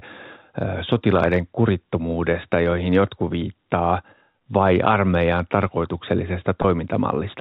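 Speech over a G.711 telephone path, band-limited below 4 kHz, suffers packet loss with pitch repetition twice: from 4.32 to 4.34 s and from 6.62 to 6.64 s. Each gap lasts 20 ms, which fits a single lost packet. The receiver filled each hole by repeating the last pitch period of the voice instead of leaving silence. Because both losses are so short, the concealment never fades to silence. Each one sounds like a brief, slightly held, buzzy tone before the speech resumes.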